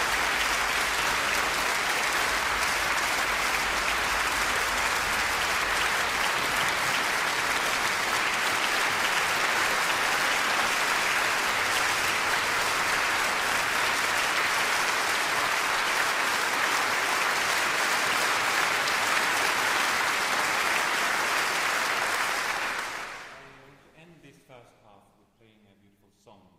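Nothing stood out as a technical problem on listening to this recording.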